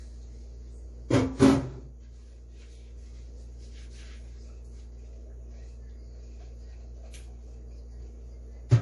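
A recording of sounds that has a watery, swirling texture throughout, with smeared attacks and nothing above 11.4 kHz. The likely cause is MP3 compression at a low bitrate, which fits roughly 48 kbps, starving weak frequency lines and cutting the treble.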